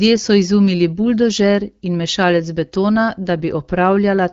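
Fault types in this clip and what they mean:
No fault can be heard anywhere in this speech. It carries the band-limited sound of AMR wideband (HD Voice) coding, with nothing above about 7.6 kHz and only light coding roughness, which fits a rate around 12.65 kbit/s.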